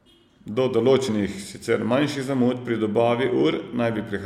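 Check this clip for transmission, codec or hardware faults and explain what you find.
One fault: compressed frames skipped at 1.07 s, just before "sicer manjših zamud pri". The decoder lost roughly 50 ms, which fits about two 23.2 ms frames, so the speech jumps ahead.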